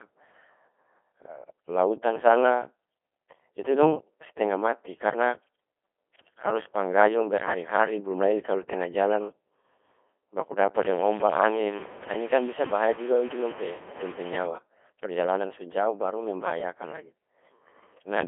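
Throughout, the speech sounds robotic and buzzy. This is the Codec 2 vocoder at work. It sends only pitch, voicing, energy and envelope, then rebuilds speech from sine waves. The damage is heavy. The band runs about 300 Hz to 3.4 kHz, nothing above 3.7 kHz, fitting a 2.4 kbit/s mode.

From 10.77 to 14.47 s, a gritty, grainy distortion rides on the speech and shifts with it. The likely cause is low bit depth without dither, with samples truncated to a coarse grid, around 6 bits. The grain sits only about 15 dB below the speech.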